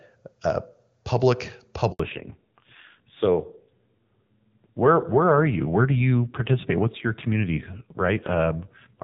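It's a speech recording, and right after "uh public" at 1.92 s the audio drops out for about 80 ms, until 2.00 s. That's a handover gap: the call switched networks and no speech frames arrived, so whatever was said in that slice is gone. From 2.00 s to the end there's a fallback to narrowband. The clear HD Voice sound heard before the switch gives way to audio with nothing above 4 kHz, duller and rougher, which fits a low-rate narrowband AMR mode taking over.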